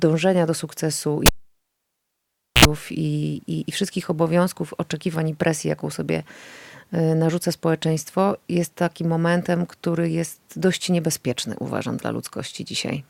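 A cable pulled and plugged in at 1.26 s produces a pop as the live connection breaks, then about 1.34 s of near silence. A 66 ms burst of 60 Hz mains buzz follows while only the plug tip touches, and a second pop brings the sound back at 2.65 s.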